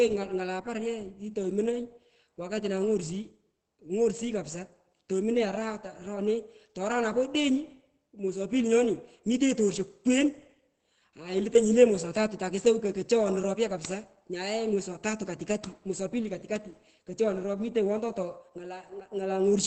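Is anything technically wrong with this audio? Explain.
Yes. Throughout, likely Opus compression in its speech mode, at a low bitrate fitting about 16 kbps, removes everything above 8.5 kHz, leaving the speech audibly muffled and hoarse.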